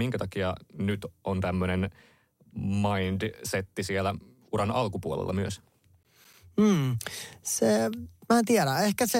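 From 6.03 to 6.34 s the speech breaks into a short burst of gritty crackle, a rapid run of tiny dropouts with hard edges that tears through the sound for about a third of a second and then clears. This is processor overload crackle: the processor fell behind and missed several buffer deadlines in a row, each gap holding silence. The spacing fits buffers of around 10 ms, with roughly seven missed.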